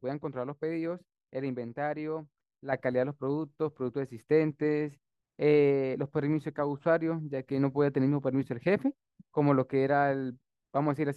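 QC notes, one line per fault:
2.73 s to end, sudden gain jump: the digital gain was most likely stepped up in one sample, with no ramp to ease the change, as happens when a level setting or bit shift takes effect at once. The speech and the background noise rise together by about 6 dB at that instant and stay louder for the rest of the clip, so the jump is heard as an abrupt step in overall level.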